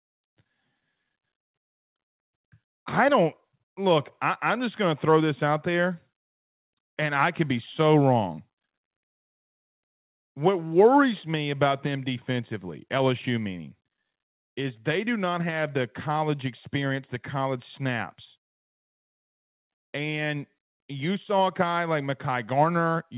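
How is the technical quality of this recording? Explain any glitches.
No glitches can be heard in this speech recording.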